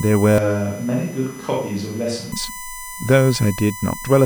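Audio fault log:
Throughout: USB whine. Current drawn by the USB bus in 1 ms frames is leaking into the audio through the power or ground, so a steady, fixed-pitch tone at 1 kHz sits under the speech, about 15 dB below it, strongest at that fundamental.
0.38 to 2.32 s: Switch to a distant microphone. The close microphone's feed likely dropped out and a farther microphone took over, so the speech abruptly turns roomy, hollow and thinner in bass, falls by about 5 dB, and carries room noise about 25 dB below it, before snapping back.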